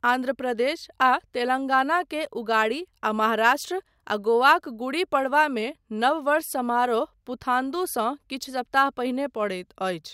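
No technical faults are audible anywhere in this recording.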